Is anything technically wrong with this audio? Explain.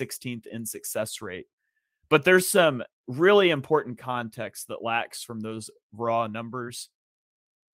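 No, nothing in this speech recording stood out as a technical problem on listening.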